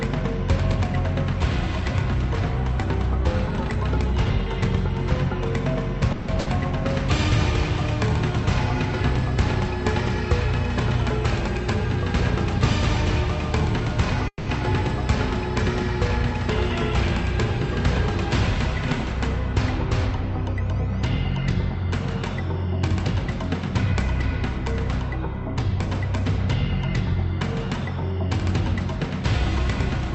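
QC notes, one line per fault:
6.12–6.30 s and 14.28–14.49 s, call audio freeze: the sound stalls and the last moment is stretched into a buzzy, fading continuation, about 160 ms at 6.12 s and about 190 ms at 14.28 s, where the fill dies into roughly 70 ms of silence. Nothing is lost; the audio resumes exactly where it stopped, now running later by the same amount. The likely cause is delayed packets draining the jitter buffer, so the receiver improvised until they arrived.
6.40–6.48 s, burst of packet loss: about 60 ms of audio never arrives in time, so the receiver extends the preceding sound as a brief, decaying buzz or hiss, lowering it across the gap. When real audio returns it comes from further on, and the 60 ms in between is missing, heard as a small jump. It falls just after the first freeze, so the two stumbles run close together.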